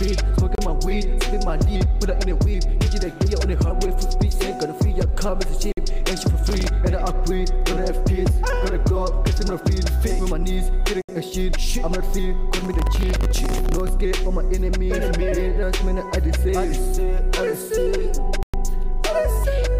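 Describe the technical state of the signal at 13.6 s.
At 13.6 s the signal is in the middle of a processor overload crackle running from 12.57 to 13.89 s. The processor cannot finish each small buffer before its deadline, and it misses many in a row. Each miss drops a sliver of silence with hard edges. The gaps are very short, which fits buffers of around a millisecond and a half. Dozens of them pile up into a gritty, tearing crackle over the sound until the load eases.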